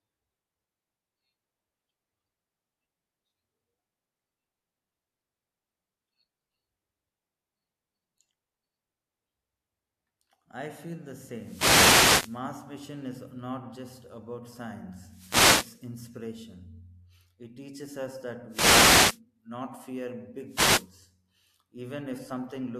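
Reflections repeatedly cancel the analogue FM radio link, so receiver noise surges as wireless microphone noise hits at 11.36–12.44 s after "I feel the", 15.00–15.91 s after "is not just about", 18.49–19.20 s, and 20.46–20.91 s after "not fear". Each is a brief swish of static over the speech.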